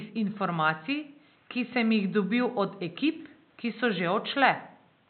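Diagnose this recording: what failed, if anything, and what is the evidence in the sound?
Nothing in the recording points to a failure at any stage of the chain. The only thing under the speech is the room's own background noise, sitting about 38 dB below it, which belongs to the space where the microphone was rather than to the system.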